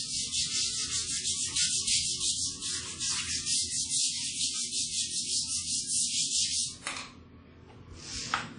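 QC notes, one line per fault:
Throughout: WMA compression, likely from a low-bitrate transform codec near 32 kbps; ringing, washy smear with breathing hiss, and nothing above 10.1 kHz, unlike plain low-pass filtering.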